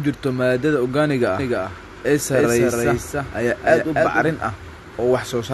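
Speech, with a doubled audio track from 1.39 to 4.31 s: a clean copy, about 5 dB quieter, trails about 300 ms behind, likely from a second, slower capture path.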